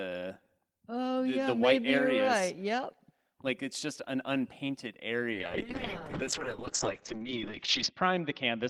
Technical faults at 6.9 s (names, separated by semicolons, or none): call bitrate drop